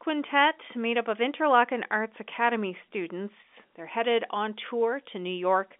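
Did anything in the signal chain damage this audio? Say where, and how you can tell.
No, the telephone-band path leaves no audible damage.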